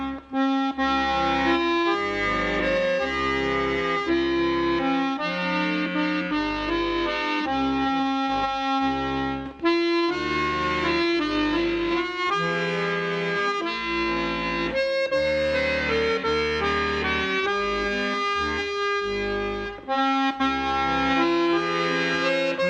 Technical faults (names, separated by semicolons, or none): none